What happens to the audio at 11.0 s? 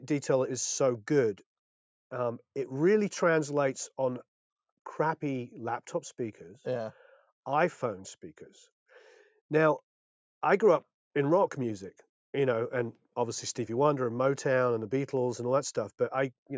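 Nothing goes wrong at 11.0 s: the audio carries on intact there, with only the normal band limit of call microphone processing, which leaves nothing above 8 kHz.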